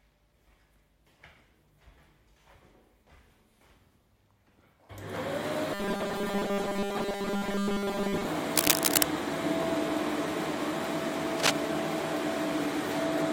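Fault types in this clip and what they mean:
Robotic sound from repeated short buffers: From 5.74 to 8.27 s the sound turns hard and metallic. A steady 200 Hz buzz rides on top of it, though the rough shape of the sound still comes through. This likely comes from playback repeating very short chunks, which fits chunks of about 5 ms, when fresh audio arrives too late. Most of this stretch is replayed material, so real detail is skipped.
Cable scratch noise: Two bursts of rough, crackly noise appear, at 8.56 to 9.05 s and at 11.35 to 11.52 s. Each is a dense, uneven scratching laid over the sound, about 5 dB louder than it. The likely cause is a worn cable, plug or control being moved, making its contact resistance jump about quickly. The first burst lasts about half a second. The second is under 0.2 s.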